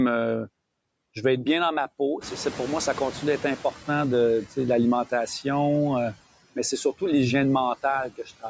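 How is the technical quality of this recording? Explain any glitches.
The speech carries processing side effects from a noise suppressor, with three distinct glitches.

Throughout, the background sinks between phrases and swells under the speech. These are noise suppressor artifacts: the suppressor pulls noise-dominated bands down by about 18 dB frame by frame.

From 2.21 to 4.42 s, starting after "bien dans ma peau" and ending before "l'alimentation euh mais c'est", the background comes through louder and then fades down. This is the noise suppressor catching up. The room noise jumps by about 16 dB around 2 s, and the suppressor's noise estimate needs 2.21 s to adapt, giving only about 9 dB of reduction meanwhile.

From 8.1 to 8.44 s, parts of the speech turn faint and swallowed, dropping by up to about 16 dB over roughly a tenth of a second in total. This is speech cut by the noise suppressor, which mistook those quiet speech components for background and turned them down with it.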